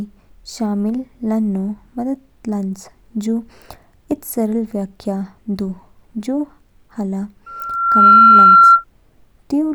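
Loudspeaker feedback squeal runs from 7.46 to 8.84 s. A single 1.4 kHz tone rises out of the speech, swelling over roughly three-quarters of a second until it sits about 15 dB above the talker. The microphone is hearing the loudspeaker it drives, and at 1.4 kHz the loop gain has crossed one, so each pass round the loop adds to the tone until it rings as a steady, piercing squeal.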